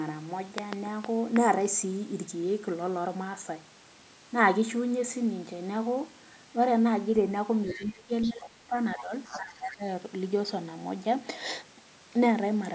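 From 7.66 to 9.84 s the echo canceller most likely failed to separate the talker from loudspeaker echo while both sides spoke at once. The result is speech suppressed in double talk: the voice ducks by about 25 dB at worst across 7.66 to 8.75 s, dips by about 10 dB from 8.96 to 9.12 s, and drops by about 15 dB between 9.31 and 9.84 s, so syllables thin out or vanish in pieces.

In the same stretch, echo likely left in the microphone signal lets the other side's voice leak through. It comes as short scraps at 7.68 to 7.91 s and 8.21 to 8.32 s, about 20 dB below the talker, then briefly at 8.98 to 9.03 s, about 15 dB down. From 9.26 to 9.39 s it is louder, about 10 dB down, and overlaps the last suppressed stretch.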